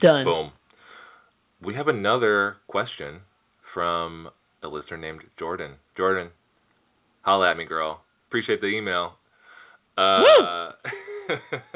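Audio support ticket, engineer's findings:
Microphone overload: harsh, crackly flattened peaks at 0.04–0.11 s (about 4 dB over, a fair chunk of samples squared off) and 10.25–10.38 s (about 2 dB over, a few percent clipped). Likely mic input gain set too hot, so peaks slam the converter ceiling.

Microphone volume stepped down: sudden level drops, voice and background together, at 0.07 s (about 2 dB), 1.08 s (about 2 dB), 7.62 s (about 3 dB) and 10.41 s (about 6 dB). Likely the call software's auto gain reacting to a mic it judged too loud or clipping. Audio sits below 4 kHz throughout, which fits a G.711 call path.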